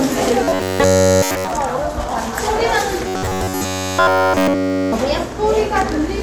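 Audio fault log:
0.44–1.52 s and 3.08–4.92 s: robotic sound from repeated short buffers, a stiff metallic 93.8 Hz buzz, likely an 11 ms chunk replayed while fresh audio stalled.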